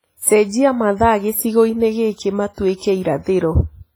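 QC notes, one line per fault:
Throughout: WMA compression. The speech sounds washy and ringing, with a hiss that swells and fades along with the voice. This likely comes from heavy transform coding at a low bitrate, around 24 kbps, where long blocks smear quantisation noise and weak components are dropped.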